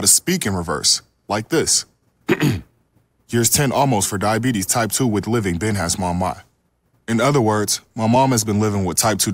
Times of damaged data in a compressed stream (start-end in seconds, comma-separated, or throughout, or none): none